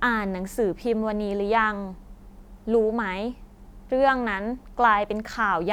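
The clip is speech, and nothing is technically wrong with it.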